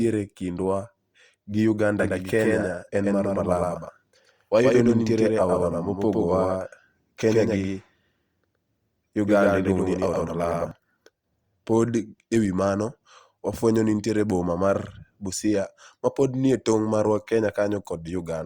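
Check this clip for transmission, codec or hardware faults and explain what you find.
One fault stands out: a doubled audio track from 1.99 s to 10.71 s. During that span the speech is heard twice. A second full-band copy trails the first by roughly a tenth of a second, at about the same level. It likely comes from the signal being captured again through a slower path, or from an edit leaving two copies out of step. The copy carries no decay or room colour. It starts and stops abruptly, giving a hard, stuttering slapback.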